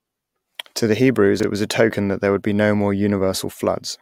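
At 1.40 to 1.44 s, just before "it was a token", the speech briefly jumbles: chunks out of order. A 10 ms chunk arrived three chunks late and plays after its successors, making three hard joins. Unlike a dropout, nothing is missing and timing stays intact.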